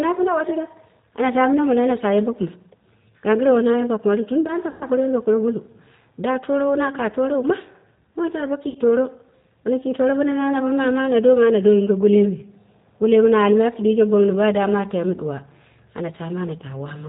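Throughout, the G.729 codec at 8 kbit/s cuts everything above 4 kHz and gives the speech a rough, synthetic grain. Plain narrowband filtering would stay smooth; this grain comes from the sparse pulse excitation.

From 4.68 to 4.87 s, and again from 8.69 to 8.77 s, VoIP packet loss concealed by the speech codec turns the sound into a buzzy tone or coloured noise that fades. That fits lost stretches of about 130 ms and 60 ms. This sound is the decoder stretching its last pitch and filter, where a hard dropout would leave silence.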